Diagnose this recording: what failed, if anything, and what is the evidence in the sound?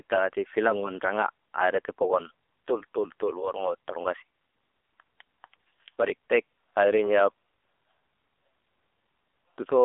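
Codec stage, throughout: AMR narrowband mobile codec. Its low-rate vocal-tract model, consistent with 7.4 kbps, makes the speech buzzy; the spectrogram shows nothing above 3.7 kHz.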